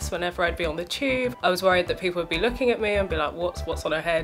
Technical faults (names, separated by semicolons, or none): none